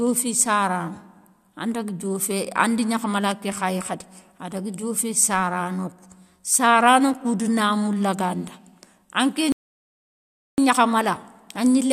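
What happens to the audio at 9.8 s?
A rebuffering stall runs from 9.52 s to 10.58 s, so at 9.8 s the speech has stopped dead. The player exhausted its downloaded audio and had to wait for more data before continuing. The result is a sudden cut to silence lasting about 1.06 s, after which the speech picks up at exactly the point where it broke off. No material is skipped; the gap simply adds just over a second to the playback time.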